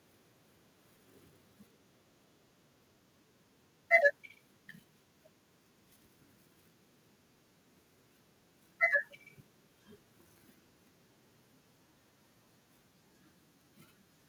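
No technical faults can be heard anywhere in the speech recording, and the signal path carries the audio without any audible disturbance.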